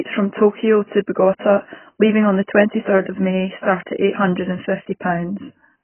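A speech recording passed through AAC-LC coding at a very low bitrate, likely around 12 kbps, and the damage runs through the whole clip. Lacking enough bits for its frequency lines, the encoder has cut everything above 3.1 kHz and coarsely quantised what remains. The AAC compression leaves the voice dull, with consonants smeared, sibilants thin and fizzy, and a warbling texture on sustained vowels.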